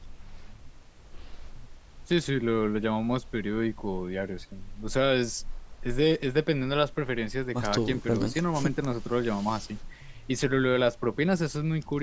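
No technical faults are audible.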